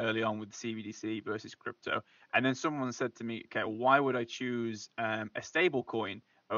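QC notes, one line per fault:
No faults found in this speech clip.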